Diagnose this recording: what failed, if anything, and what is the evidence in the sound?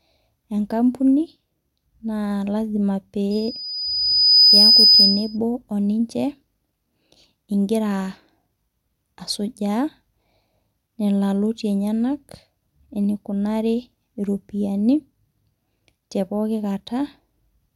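A piercing 5 kHz tone swells over roughly a second from 3.31 s, peaks about 10 dB above the speech and stops at 5.37 s: loudspeaker feedback squeal. The stage is the acoustic and analogue loop, where the microphone hears its own loudspeaker and the loop gain exceeds one at 5 kHz.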